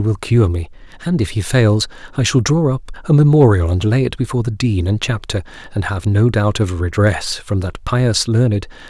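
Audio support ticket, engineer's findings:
Brief crackle on a speech peak at 3.41–3.45 s. Hard clipping: signal overdriving a gain or converter stage by about 1 dB, peaks cut flat, adding high harmonics.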